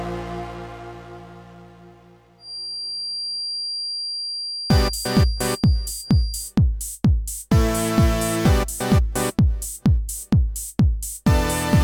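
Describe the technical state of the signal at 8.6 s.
At 8.6 s the signal is intact, with no audible fault at that moment.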